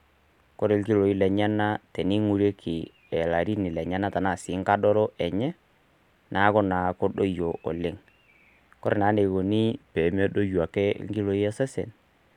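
A clock-matching stage most likely made a drift correction step between 9.71 and 10.75 s, abruptly slowing playback by 5.72 percent to rebalance its buffer before snapping back to the normal rate. Because speed and pitch move together, the speech in that stretch drops by 102 cents, roughly a semitone, and sounds dragged and flat for just over a second. It then returns abruptly to its original pace and pitch.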